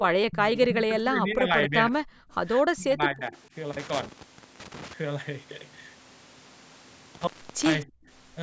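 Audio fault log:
0.29–1.93 s: speech suppressed in double talk. The speech sinks by up to roughly 30 dB in pieces over about 1.5 s. Both sides were likely talking at once. The echo canceller could not separate the talker from loudspeaker echo, so it turned everything down.
2.21–2.32 s: background gated by the echo canceller. The room sound drops by about 39 dB for about a tenth of a second. The canceller clamped the microphone while the loudspeaker played, then released it.
2.75–3.34 s: speech suppressed in double talk. The speech dips again by roughly 25 dB over about half a second. Overlapping talk is the likely trigger. The canceller attenuated the wanted speech along with the echo.
3.73–4.93 s: intermittent contact. The sound cuts out with crackle at the edges, and the line stays open for 0.51 s. A loose plug or cable broke the circuit, so only faint residue remains until contact returns.
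7.15–7.75 s: intermittent contact. A second dropout with crackling edges leaves the line open for 0.39 s. A loose connection opened briefly before springing back.
7.86–8.08 s: background gated by the echo canceller. The background falls by about 40 dB for about 0.2 s. The canceller suppressed the microphone hard during loudspeaker playback and let go afterwards.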